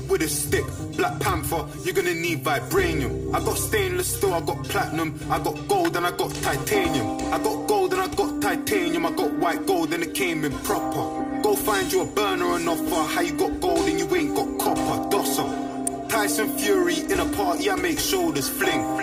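From the start and for the whole clip, the sound has a hollow, phasey colouring typical of channel delay (comb filtering). One channel arrives roughly 3 ms after the other, and when the two are summed to mono the shared content cancels at regularly spaced frequencies, with the first notch around 200 Hz. The notches stay fixed, thinning the low-mid body and leaving a hollow tone throughout.

At 5.85 to 5.87 s a sharp transient sits on top of the sound, and at 15.87 s another short one follows. Both have the character of an electrical switching spike, most likely arcing from a nearby switch, motor or static discharge coupling into the audio line. Neither disturbs the underlying signal. Each is a brief, bright transient added over it.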